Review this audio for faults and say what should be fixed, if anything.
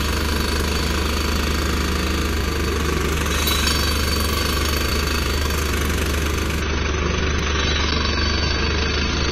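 At 2.41 s and again at 7.39 s there's a tiny skip where roughly 7 ms of audio vanishes and the two sides butt straight together. That's likely audio missing between chunks: the recorder drops a sliver each time it swaps buffers, and the spacing fits chunks about 2.5 s long. Have the capture overlap or double-buffer its chunks so nothing is lost at the handover.

From 6.62 s to the end, the quality falls off abruptly with no gap: the top end disappears above about 6.3 kHz and the sound gets duller and more artefact-laden. That's an adaptive stream at a lower bitrate, consistent with the player dropping from a high-rate AAC version to a much leaner one. Give the stream more buffering headroom or set a higher bitrate floor so it doesn't step down this far.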